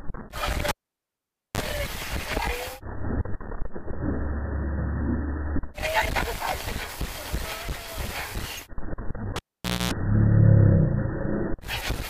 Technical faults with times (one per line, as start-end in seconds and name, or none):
0.69-1.60 cable pulled and plugged in
9.36-9.92 cable pulled and plugged in